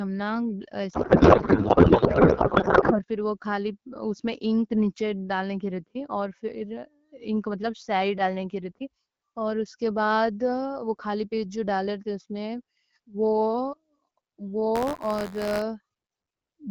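A codec payload misread runs from 0.93 to 3.01 s. The sender packed the AMR frames octet-aligned, but the receiver unpacked them as bandwidth-efficient, so every field lands in the wrong place. The speech vanishes under garbled noise and warble that barely tracks it.

Buffer tearing follows from 14.75 to 15.63 s. The writing program and the reading hardware have slipped, so a small slice of each buffer replays audio from about 20 ms earlier, with hard joins on both sides. This gives a robotic 86.1 Hz buzz, which fits a 512-sample buffer. Around both faults the AMR-WB coding at 12.65 kbit/s leaves only light codec roughness.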